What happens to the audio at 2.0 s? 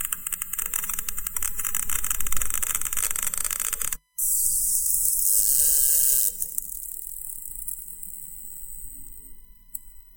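A faint, steady whine sits well below the sound at 2.0 s, pitched at 1 kHz and strongest at 2 kHz. This USB whine runs throughout the clip, from the bus's 1 ms frames leaking in through power or ground.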